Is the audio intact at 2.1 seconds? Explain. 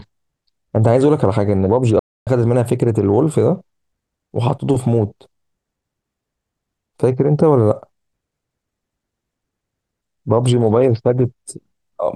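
No. At 2.1 seconds the speech has dropped out completely: the sound halts mid-flow at 1.99 s and stays silent for about 274 ms, resuming at 2.27 s. This is a playback stall. The likely cause is the player running short of buffered data or having its output thread blocked, so nothing reached the output until it recovered and the audio carried on again.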